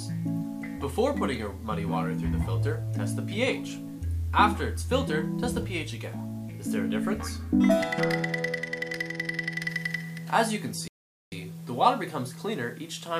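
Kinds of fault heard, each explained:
Playback stall: the player most likely ran short of buffered data, or its playback thread was held up, so nothing reached the output until it caught up again. Here the sound cuts off in mid-flow at 10.88 s and the output stays silent for about 440 ms, to 11.32 s, before the audio picks up again. The gap is long enough to register as a clear dropout rather than a click, breaking the continuity of the sound.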